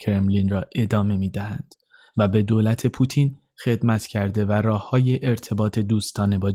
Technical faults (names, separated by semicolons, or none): none